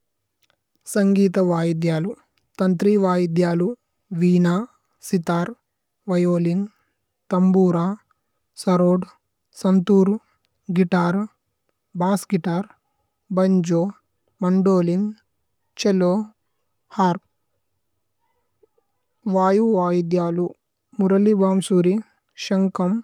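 No technical faults can be heard anywhere in the speech. Nothing in the recording calls for a time mark or a note of trouble.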